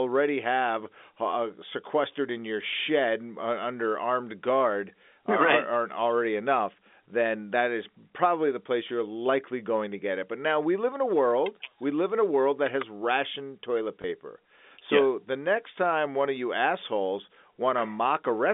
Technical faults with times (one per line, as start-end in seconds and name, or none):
14.02 packet loss with last packet repeated